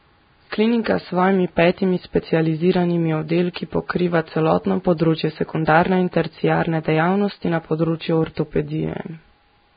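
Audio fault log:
Throughout, Vorbis compression: the speech was likely squeezed through a low-bitrate Vorbis encode, around 16 kbps, which removes everything above 4.9 kHz and quantises the remaining treble so coarsely that fine detail turns to noise, giving heavy hiss, graininess and smeared consonant onsets.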